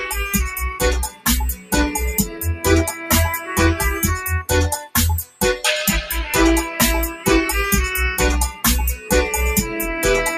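A noise suppressor applied to music or sounds is active from start to finish. Built for speech, it treats steady tones and decaying tails as noise, so its gain swings by around 10 dB, leaving sustained material pumping and thinned while sharp onsets pass largely intact.

Sound cut by the noise suppressor occurs at 0.74 to 1.73 s, 2.26 to 3.56 s, 4.43 to 5.64 s, 7.12 to 7.27 s and 8.96 to 9.11 s. The suppressor misread held or fading sound as noise and pulled it down, by about 17 dB in the first and third spans and about 8 dB elsewhere, so tails sink abruptly.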